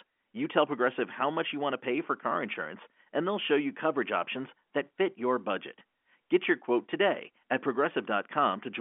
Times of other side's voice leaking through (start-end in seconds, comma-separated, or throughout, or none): none